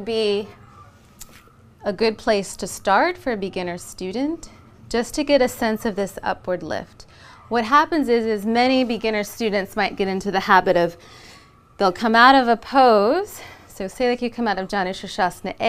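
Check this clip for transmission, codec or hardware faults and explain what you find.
Nothing wrong found in the transmission, codec or hardware path anywhere in the clip.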